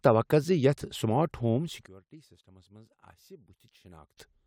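From 1.86 s to 4.18 s, just after "سمارٹ ہوم", the speech drops by about 24 dB and turns faint. One channel inverted is the likely cause. Reversed polarity makes the centred voice cancel in a mono sum, leaving only the small difference between channels.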